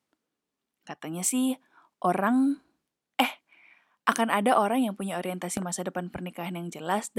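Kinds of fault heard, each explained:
Loud pop: Two sharp pops in quick succession land between 5.57 and 5.64 s, after "ada orang yang punya". They peak about 10 dB above the speech, which continues beneath. A brief voltage pulse, likely from a plug, switch or static, was added.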